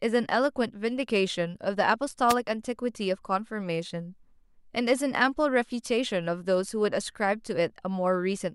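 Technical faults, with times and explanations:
2.29–2.34 s, wireless microphone noise hit: a brief swish of static, about 56 ms long, breaks across the speech. The analogue FM radio link from the microphone faded for that moment as reflected signal paths cancelled at the receiver. With too little carrier, the receiver's own noise rose, so the fault is heard as a short burst of hiss rather than a dropout to silence.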